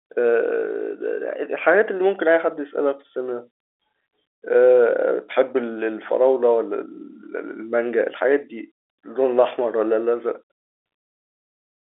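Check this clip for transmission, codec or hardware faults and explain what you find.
Nothing stood out on listening to this speech clip, which carries the narrow band of ordinary G.711 telephone coding.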